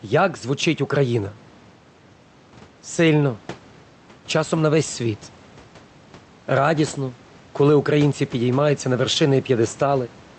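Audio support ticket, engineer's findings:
Gain pumping throughout the speech: level swells in the gaps, then ducks by around 5 dB under each loud syllable, so the dynamics end up squashed. Likely input gain set way too hot, with a fast limiter clamping down on every peak. Room noise sits about 29 dB below the speech. Audio tops out near 8 kHz, consistent with the call codec.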